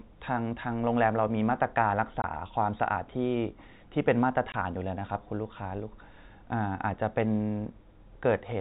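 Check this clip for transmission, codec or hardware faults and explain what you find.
Two brief dropouts in this speech clip come from packet loss filled with silence, at 2.22 to 2.24 s and again at 4.52 to 4.54 s. Each time the receiver found no audio for a 20 ms stretch and played silence in its place. Each gap's length fits a single 20 ms packet going missing. The speech cuts out abruptly and returns just as suddenly. The G.711 telephone coding carrying the call is audible in its limit of nothing above 4 kHz.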